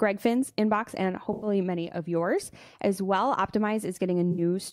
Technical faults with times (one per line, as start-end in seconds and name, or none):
1.33-1.47 AAC frame loss with concealment
4.31-4.41 AAC frame loss with concealment